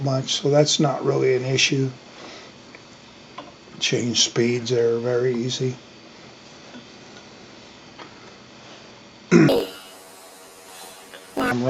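From 9.49 s to 11.53 s the audio jumps up an octave and picks up a fluttery buzz, the signature of planar audio read as interleaved. Each chunk stored all its left samples and then all its right ones, but got read as alternating pairs, so every chunk plays twice at double speed, left then right. The chunks here are about 21.33 ms long, which fits a 1024-sample block, and that's where the 46.9 Hz flutter comes from.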